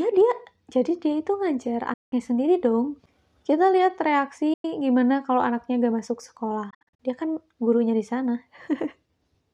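At 1.93 s the sound cuts out abruptly. Silence holds for about 180 ms, until 2.13 s. At 4.54 s a second hole opens, about 100 ms long, ending at 4.65 s. From 6.70 to 7.00 s the sound breaks up into several short gaps. The longest lasts about 60 ms, with about 200 ms missing in all. Each time, the audio resumes further along, as if it had kept playing. This is likely a Bluetooth dropout, with packets reaching the headphones too late and being discarded.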